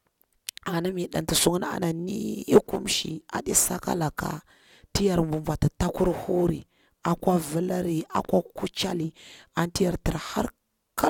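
No technical faults are audible.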